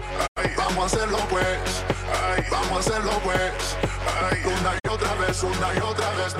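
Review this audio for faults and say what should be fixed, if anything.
Two digital broadcast dropouts occur, from 0.26 to 0.40 s and from 4.78 to 4.89 s. Each time the receiver stopped getting valid frames and muted, with a fade of about 20 ms into silence. About 85 ms of programme is lost in the first gap, which fits two frames, and about 43 ms in the second, which fits one. The gaps are clean, faded silence. Packet-loss concealment would instead leave a buzzy, repeated or smeared fill. Better reception margin or stronger error protection on the transmission would prevent these holes.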